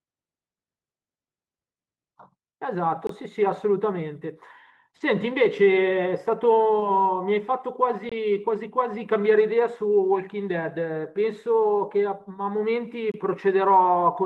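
Speech, with a gap between chunks at 3.07, 8.09 and 13.12 s. Each hole lasts about 23 ms, spaced 5 s apart. At 6.80 to 6.84 s, short concealed packet loss leaves a brief smear. About 20 ms never arrived in time and was filled by extending the preceding sound. The call codec limits the top end to around 12 kHz, which fits Opus at a modest bitrate.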